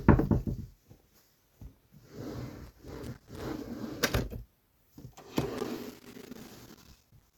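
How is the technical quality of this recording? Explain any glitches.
The recording has two bursts of loose connector crackle, which are its clear technical flaws. From 2.67 to 3.42 s, and again from 5.58 s to the end, the sound breaks into irregular scratching and crackle. A worn or dirty contact in the cable path is making and breaking as it shifts. That chops the signal on and off unpredictably, and any DC on the line turns each reconnection into a click.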